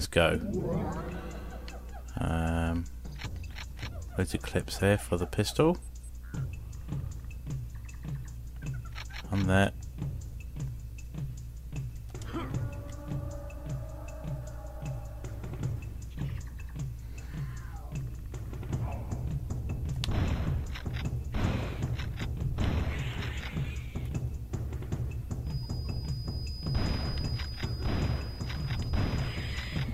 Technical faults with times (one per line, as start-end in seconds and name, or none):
25.41-29.94 feedback whistle